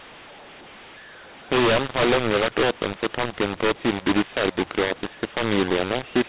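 Throughout, mu-law and A-law are mixed up: A-law telephone speech decoded as mu-law scrambles levels, making it harsh and distorted, with pauses filling with noise. The waveform shows jagged amplitudes and no true silence, and the spectrogram shows broadband hiss under a band that stops near 4 kHz.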